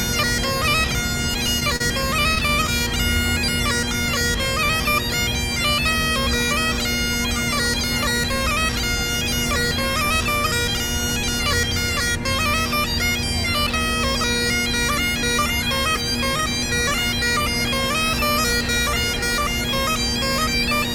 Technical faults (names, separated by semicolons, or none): repeated stalls (stutter)